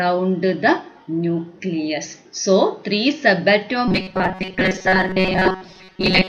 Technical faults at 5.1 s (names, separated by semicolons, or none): robotic sound from repeated short buffers